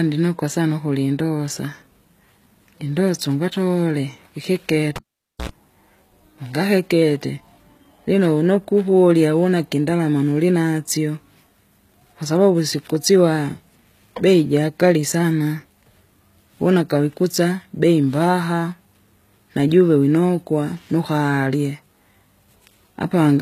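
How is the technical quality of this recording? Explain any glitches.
The recording has two audible problems: heavy compression throughout and one cable dropout.

Across the whole clip, the treble sounds synthetic. S sounds turn gritty and lispy. Nothing is present above 14.9 kHz. This is likely HE-AAC compression at a low bitrate, around 20 kbps. The codec rebuilds the treble by copying lower bands upward, so the harmonics don't line up.

From 4.96 to 5.49 s, a cable is pulled and plugged in. A pop cuts the sound to near silence for about 0.49 s. A 60 Hz mains buzz lasts about 75 ms while only the tip makes contact. A second pop follows as the sound returns.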